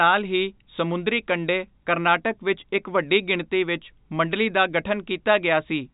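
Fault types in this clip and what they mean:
No faults can be heard in this speech clip. The telephone-style G.711 coding is audible as a band limit, with nothing passing above about 3.8 kHz, and any quantisation noise it adds is faint at most.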